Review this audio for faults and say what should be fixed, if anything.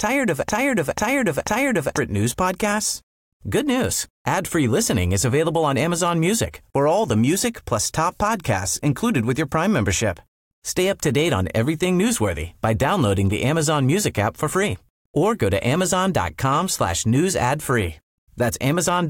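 From the very start until 1.98 s, just before "news podcasts", the speech is caught in a broken-record loop: a 0.49 s fragment plays three times back to back, identical each time. The loop is already running when the clip begins. The likely cause is a stalled player or stream that kept resending its last buffered piece, so the speech that belonged there is lost. Unlike an echo, the repeats don't overlap or fade. To prevent it, detect stalls upstream and output silence rather than replaying the buffer.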